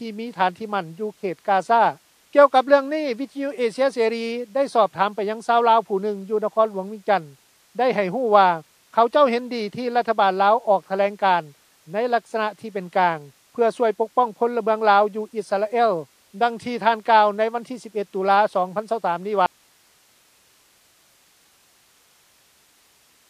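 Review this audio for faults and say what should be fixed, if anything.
MP3 compression runs through the whole clip, and the damage is plainly audible: the sound is watery and swirly, with chirpy metallic edges on bright, noisy content and smeared attacks. This most likely comes from encoding at a very low rate, which fits a bitrate around 40 kbps. The encoder ran short of bits, cut the treble at a fixed frequency and kept switching weak frequency lines on and off between frames. On a spectrogram this appears as a hard horizontal ceiling with nothing above it and speckled, flickering holes below it. Encode from the original at a higher bitrate, or keep a lossless master so the clip is never squeezed this hard.

An audio dropout to a faint residue starts at 19.46 s and lasts to the end of the clip. The signal cuts out abruptly rather than fading, leaving only hiss roughly 40 dB below the normal level. 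The likely cause is a signal lost upstream while the recording path after the break stayed live and kept capturing its own noise floor. On the waveform this looks like a sudden collapse to a thin, flat band of noise. A spectrogram shows the content ending on a sharp vertical edge, followed by even, faint broadband grain. Monitor input connections and levels during capture so a lost feed is caught and re-recorded straight away.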